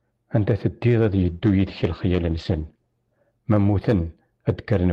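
From 1.11 to 4.23 s there is a call bitrate drop. Highs above 8 kHz vanish. The speech turns rough and muffled, which fits about 12 kbps.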